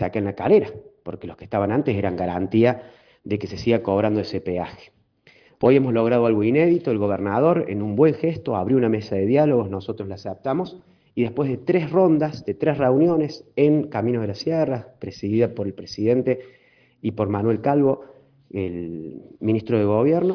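Nothing in the sound calls for comment, with no technical fault heard anywhere along the clip.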